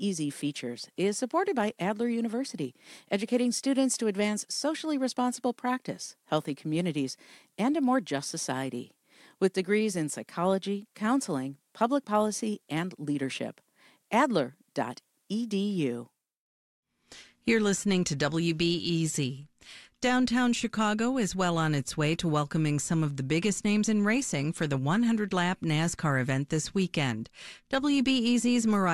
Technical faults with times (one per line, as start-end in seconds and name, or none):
0.12-28.92 clock slip clicks